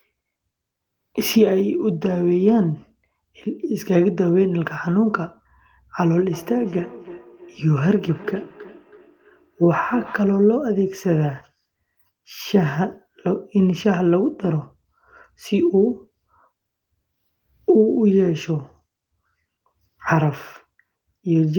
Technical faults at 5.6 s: none

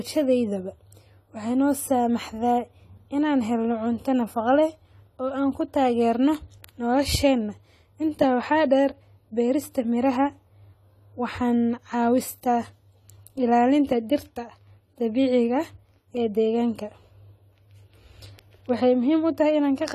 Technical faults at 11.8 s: AAC compression

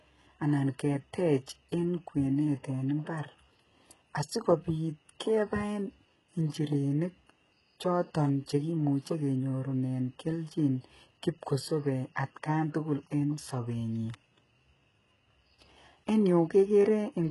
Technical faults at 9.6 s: HE-AAC compression

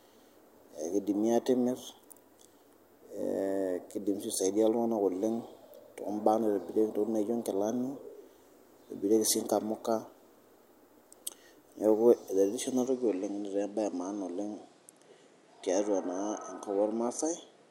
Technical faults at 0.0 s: none

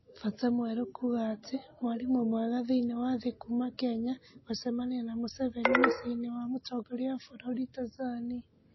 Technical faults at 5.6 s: MP3 compression

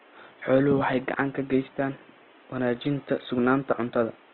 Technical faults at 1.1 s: Opus compression

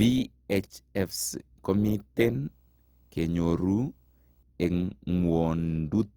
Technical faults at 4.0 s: Opus compression; video or display buzz

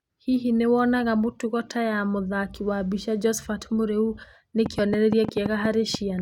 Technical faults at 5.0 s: train of clicks

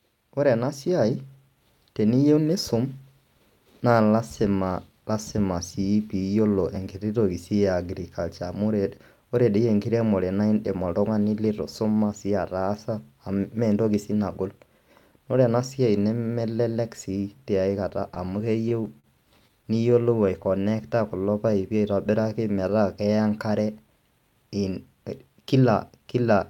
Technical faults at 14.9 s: none

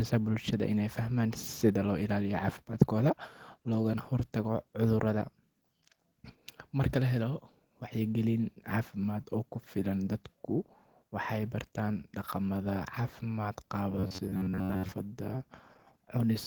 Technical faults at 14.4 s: robotic sound from repeated short buffers

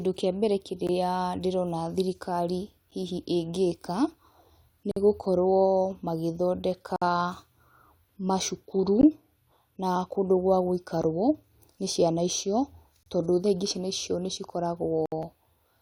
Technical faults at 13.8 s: none

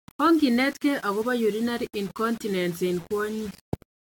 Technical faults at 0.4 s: low bit depth without dither; generation loss

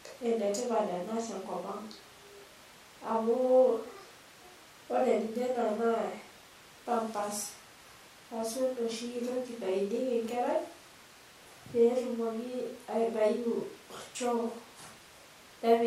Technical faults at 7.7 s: none

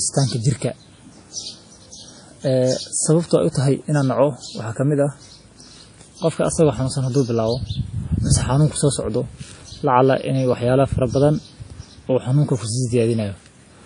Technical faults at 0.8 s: WMA compression

